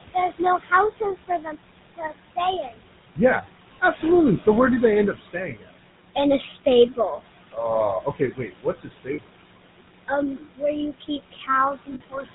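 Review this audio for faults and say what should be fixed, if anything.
The background noise rises and sinks with the speech. That is noise suppressor artifacts. The room noise, about 12 dB below the speech, is being pulled down by about 19 dB frame by frame, band by band, so what survives fluctuates unnaturally. Fix: use gentler suppression with smoothing over time, so the residual noise stays steady.

The whole clip has a buzzy, gravelly roughness and nothing above 4 kHz. That is the GSM full-rate codec, which fits a 13 kbps stream. It rebuilds the sound from a vocal-tract model driven by coarse, regularly spaced pulses, and that excitation is what sounds rough. Fix: send the audio through a wideband codec such as AMR-WB or Opus.

Parts of the speech sound swallowed and faint in three stretches. From 0.14 to 4.47 s, up to "where do they end", the dips reach about 17 dB. From 5.13 to 9.3 s, after "where do they end", and from 10.08 s to the end, they reach about 21 dB. 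Together about 3.7 seconds of sound are affected. This is speech cut by the noise suppressor, which misjudges soft speech as noise and turns it down with the background. Fix: lower the suppressor's aggressiveness or add a voice-activity check.

At 9.14 to 9.19 s (40 ms) and 11.94 to 12.01 s (60 ms) the sound freezes into a short metallic ring. These are lost GSM frames, which fits two and then three missing 20 ms frames. The decoder repeats the last good frame's settings to conceal them. Fix: add error protection or better jitter buffering on the transmission link.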